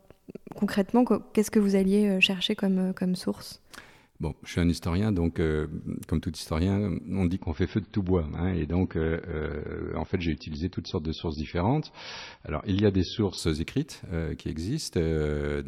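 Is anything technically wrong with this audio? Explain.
Yes, there's an adaptive stream dropping to a lower bitrate. After "tout historien on dit", from 7.38 to 13.38 s, the treble suddenly stops at 5.9 kHz and gets swirly, which fits a switch to roughly 28 kbit/s MP3. It recovers without a gap before "écrites qui".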